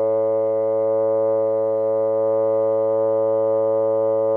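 No technical faults can be heard anywhere in this music clip. Nothing in the audio points to a problem in how it was captured, processed or delivered.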